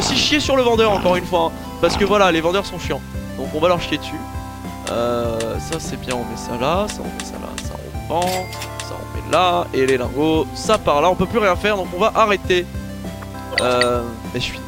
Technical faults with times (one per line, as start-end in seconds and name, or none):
0.00-14.67 low bit depth without dither